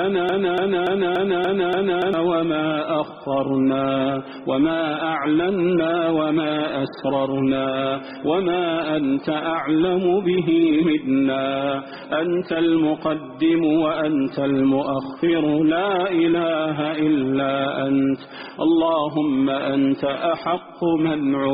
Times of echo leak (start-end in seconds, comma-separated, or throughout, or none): none